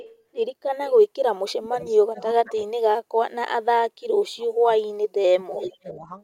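From 0.0 to 0.22 s an echo leak is heard: a faint copy of the speech returns about 384 ms late, around 20 dB below the direct signal, most likely because the far end's echo canceller let loudspeaker pickup through to its microphone.

Speech suppressed in double talk follows at 1.5–3.78 s, 4.04–4.69 s and 5.07–6.1 s. The speech dips sharply, by as much as about 40 dB, and breaks up. This is likely an echo canceller muting both talkers when it could not separate them.

A second echo leak occurs at 5.59–5.71 s, during the last suppressed stretch. The delay is about 389 ms, and the echo is stronger this time, roughly 10 dB below the speech.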